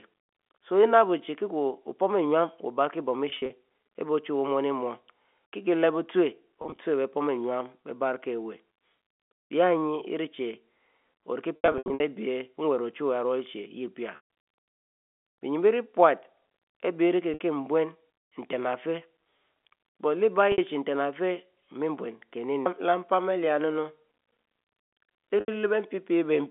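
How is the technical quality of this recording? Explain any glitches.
Packet loss with pitch repetition breaks up the speech eight times: at 3.30, 6.62, 9.44, 11.56, 14.16, 17.34, 20.52 and 25.40 s. Stretches of audio went missing. The receiver filled each gap by repeating the last pitch cycle and fading it out. Short gaps of 60 to 80 ms sound like a brief buzzy hold. The longest, about 280 ms scattered around 11.56 to 12.00 s, dips toward silence before the speech resumes. The telephone band, 200 Hz to 3.5 kHz, is audible throughout.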